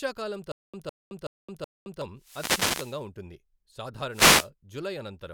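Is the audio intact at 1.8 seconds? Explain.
No. From 0.52 to 2.02 s the playback likely stalled, and each time it recovered it replayed its last fragment and then ran dry, a stutter with silent gaps. At 1.8 s you are inside that pattern: a 157 ms burst of speech repeats four times, each followed by 218 ms of dead digital silence, a steady 375 ms cycle. The speech that belonged in that interval never plays.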